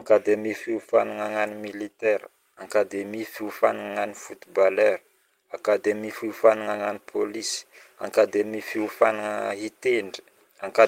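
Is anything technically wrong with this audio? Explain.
No, nothing in this speech recording stood out as technically wrong on listening.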